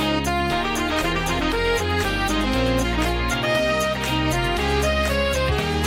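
Nothing goes wrong anywhere in this audio, so there's no fault to point to at any moment.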